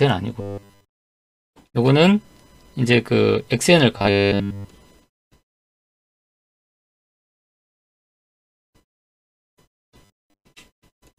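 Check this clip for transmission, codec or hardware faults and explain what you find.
Three kinds of transmission fault can be heard: a robotic buzz in three places, one freeze, and a sped-up stretch at the end.

Robotic sound from repeated short buffers appears at 0.41 to 0.85 s, 3.98 to 4.68 s and 10.05 to 10.44 s. A 100 Hz buzz replaces the sound, which points to about 10 ms of audio being replayed over and over. The likely cause is new audio arriving too seldom, with the receiver filling the wait by looping the last fragment while essentially all of the real material in those spans is skipped. The result is a rigid metallic drone that only loosely follows the underlying sound.

A call audio freeze runs from 5.71 to 7.72 s. The audio drops to silence for about 2 s and then resumes exactly where it stopped, with nothing lost. This fits packets likely held up in transit so that the jitter buffer ran empty. 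Because the missing stretch is delayed rather than discarded, everything after it arrives about 2 s later than it should.

A jitter buffer speed-up follows from 7.83 s to the end at 11.18 s. Playback runs at about 138% speed while keeping the same pitch, so the sound comes across as hurried. The receiver is working off the backlog left by the freeze. It repeatedly cuts out short pieces lasting one or a few pitch periods, and about one and a half seconds of audio is removed in total.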